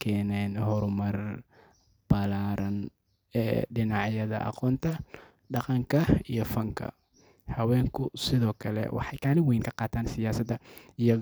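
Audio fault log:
8.98–11.21 s, time-stretched section: just after "sidoo kale" the pace suddenly jumps to about 1.5 times normal speed and holds there to the end, while the pitch stays unchanged. The sped-up passage sounds rushed. This is likely software compressing the segment to fit a shorter duration, keeping pitch constant by discarding small slices of the waveform rather than resampling it.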